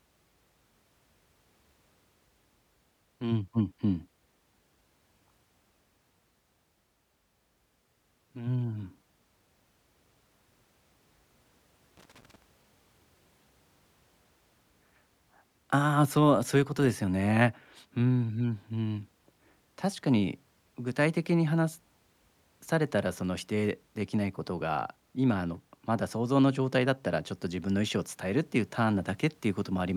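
From 11.97 to 12.42 s the speech is broken by a burst of loose connector crackle, lasting about 0.45 s. A worn or dirty contact in the signal chain is making and breaking as it shifts, chopping the audio on and off. What separates it from digital dropouts or buffer clicks is the irregularity: the scratchy bursts follow no steady spacing or repeat rate, and they come in one physical cluster rather than as clean, evenly timed gaps.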